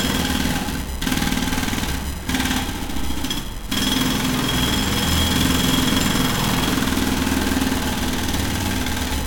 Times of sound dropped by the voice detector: none

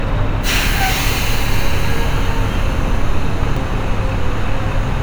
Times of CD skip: 3.56

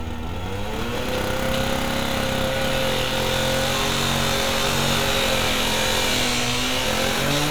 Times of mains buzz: none

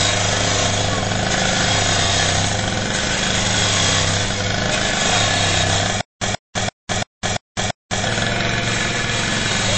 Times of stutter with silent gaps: 6.01-8.05

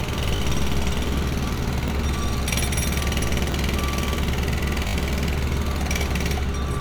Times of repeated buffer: 0.36-0.40, 1.88-1.90, 3.52-3.54, 4.88-4.94

